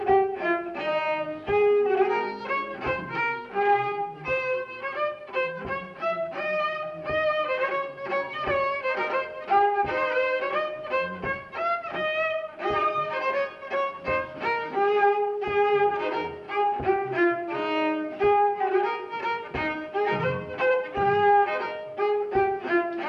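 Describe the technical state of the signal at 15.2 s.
At 15.2 s, as throughout the clip, the sound runs slow and about 5.5 semitones low, at 0.726 times normal speed. This is a wrong sample rate, which fits 44.1 kHz material played back at 32 kHz.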